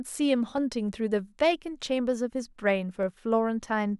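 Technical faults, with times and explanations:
0.58–3.64 s, clock drift buffer slips: about seven regular clicks through the speech, one every 0.61 s. That steady spacing likely comes from two clocks disagreeing by a few hundred ppm, so the buffer periodically drops or repeats a handful of samples.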